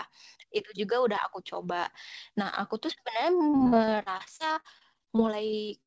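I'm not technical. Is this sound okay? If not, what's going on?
No, not quite. From about 3.50 s to the end at 5.9 s, there's repeated packet loss, the kind that gives a robotic sound. Small chunks of the audio went missing 26 times in that last couple of seconds, each gap no longer than about 46 ms. Each time, the system papered over the hole by stretching out the sound just before it. With the gaps so close together, about a quarter of that stretch is patched-in filler, so it comes across choppy.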